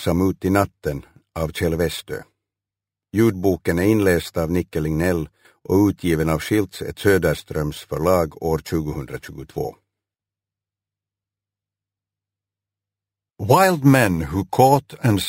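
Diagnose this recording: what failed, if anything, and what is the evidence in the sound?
A bright metallic fizz rides on the sound for the whole clip, about 21 dB below it, rising and falling with its level. This is imaging from sample-and-hold upsampling at the sample-rate conversion stage. Audio at 12 kHz was raised to 48 kHz by repeating samples unfiltered, mirroring the spectrum into the 6 to 12 kHz band and above.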